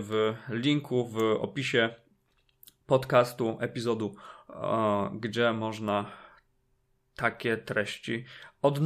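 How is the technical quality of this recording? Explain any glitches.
No audible glitches or faults.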